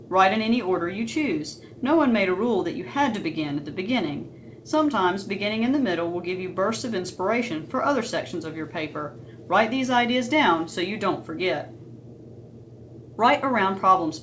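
No technical fault can be heard anywhere in the audio. It has passed through a working wideband call path, which leaves nothing above about 8 kHz and adds the usual coding texture typical of a codec like G.722.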